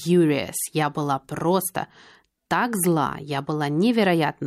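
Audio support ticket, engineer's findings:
No faults found on this speech clip; nothing heard warrants action on any component. Ticket can be closed with no findings logged.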